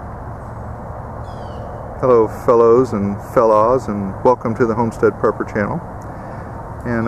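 Nothing in the audio stood out as a technical fault on listening.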